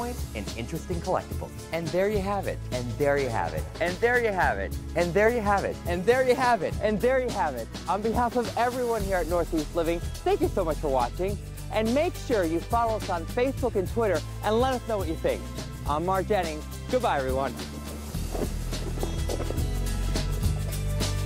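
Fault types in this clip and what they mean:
Drift correction step: from 1.18 to 1.86 s, roughly two-thirds of a second, everything runs about 5.3% fast and jumps up around 89 cents, just shy of a semitone, then drops straight back to normal. Speed and pitch move together and the change is abrupt, not gradual. That's likely clock-matching software nudging the playback rate in one step to refill or drain its buffer, then snapping back once it's caught up.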